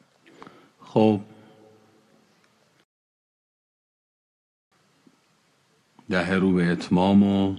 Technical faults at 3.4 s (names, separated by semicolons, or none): rebuffering stall